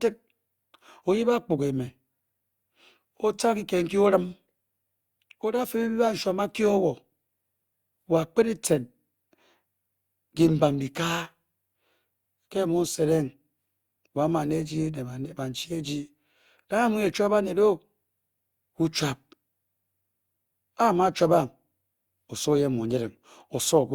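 Across the whole speech clip there is a swirly, hollow smear and softened attacks, heavier than one pass at about 64 kbit/s would give. That points to generation loss, likely from Opus re-encoding about three times, each pass adding fresh quantisation on a shifted frame grid.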